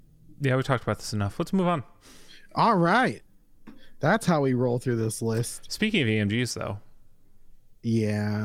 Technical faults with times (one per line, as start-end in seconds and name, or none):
none